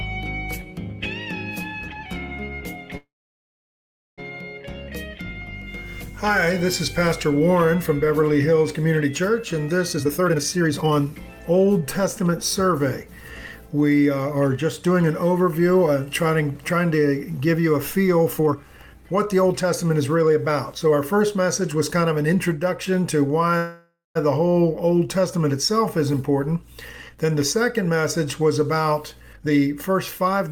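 From 2.97 to 4.20 s the sound stalls in a call audio freeze, likely because packets were held up and the jitter buffer ran dry. The last sound carries on briefly as a fading buzz, then about 1.1 s of silence, before the audio resumes exactly where it stopped. Nothing is lost, unlike a dropout. The gap simply pushes everything 1.2 s later.

From 9.93 to 11.40 s comes a jitter buffer speed-up, with the sound running at 151% while the receiver trims repeated pitch-period-sized slices, roughly 0.7 s in total. The pace is clearly rushed, yet the pitch stays put, which separates it from a resampling or clock error.

From 18.28 to 22.33 s, a milder speed-up at 111% removes around half a second.

From 23.57 to 24.17 s, a shorter freeze fills 0.58 s, about 0.19 s of it silent, and again nothing is missing.

Two more speed-ups follow. The first, at 110% from 26.13 to 27.25 s, removes only a tenth of a second. 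The second, at 123% from 29.33 to 30.48 s, trims about 0.3 s.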